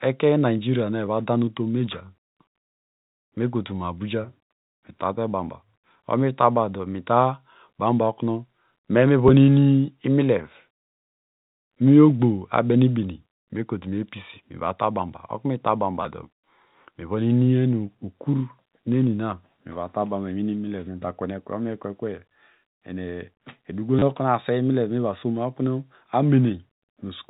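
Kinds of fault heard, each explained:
Packet loss with last packet repeated: Short stretches of the speech went missing. The receiver filled each gap by playing the previous chunk again. This happens at 1.06 s and 9.28 s, each about 10 ms. It happens at 16.03–16.05 s and 23.99–24.02 s, the last being a brief robotic stutter. The sizes fit 10 ms packets. The phone-band sound comes through G.711 coding.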